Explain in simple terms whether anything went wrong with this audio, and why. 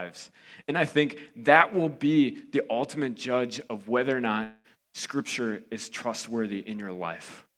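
Something likely went wrong in the network carrying this speech: a long network dropout, where audio stopped arriving for a short while. From 4.43 to 4.67 s, the receiver had nothing new to play, so it stretched out the last sound it had, which is heard as a fading buzz for about two tenths of a second, then a brief moment of silence. When the speech resumes, about 200 ms of it is simply gone and never comes back.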